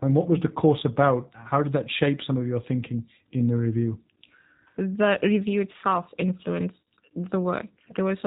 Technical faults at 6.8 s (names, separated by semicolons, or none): G.729 codec; VoIP packet loss concealed by the speech codec